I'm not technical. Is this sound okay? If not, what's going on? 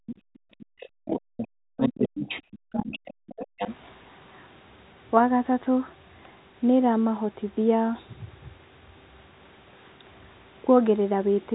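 No. In the first few seconds the talker's speech keeps dropping out. It falls almost to silence from the start to 0.17 s, and again from 0.6 to 1.18 s, 1.76 to 2.3 s and 2.69 to 3.5 s. This is speech suppressed in double talk. Both people were likely talking at once, and the call's echo cancelling mistook the talker for echo and turned everything down. It differs from a bad connection because the gaps come only while the other side is speaking.

A second, fainter voice also slips in. It is the other side's voice leaking through: a tiny scrap at 0.34 s, a stretch from 0.79 to 1.48 s, and another from 3.3 to 3.76 s. The other person's voice is likely coming out of the talker's loudspeaker and being picked up again by the microphone, because the echo cancelling didn't remove all of it. Unlike background chatter in the room, it is the far-end caller. It overlaps the dropouts and appears just after them. 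The narrow, phone-like tone throughout is just normal telephone coding.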